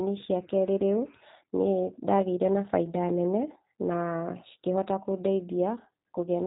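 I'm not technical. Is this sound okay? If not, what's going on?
No, it isn't quite right. The whole clip has passed through the G.729 codec, a system used for internet phone calls. It doesn't send the speech itself. It sends a compact description of the voice, and the receiving end rebuilds the sound from that. Everything above about 3.8 kHz is gone, so the speech sounds muffled and phone-like. The rebuilding is clearly audible too, giving the speech a rough, slightly artificial edge from start to finish.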